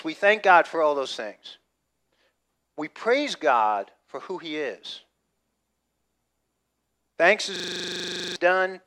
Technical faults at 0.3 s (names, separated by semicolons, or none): none